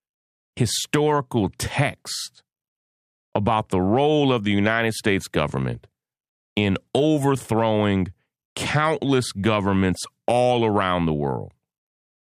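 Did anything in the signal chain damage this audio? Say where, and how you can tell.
No, nothing in this speech recording stood out on listening as damage from any stage of the signal chain.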